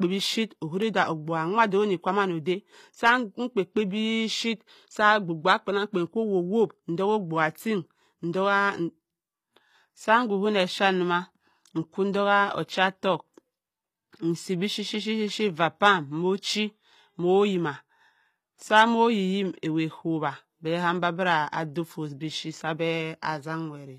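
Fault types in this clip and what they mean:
HE-AAC compression: likely low-bitrate coding that rebuilds the treble from copied lower bands, which fits about 24 kbps, leaving s sounds plainly gritty and metallic throughout the speech.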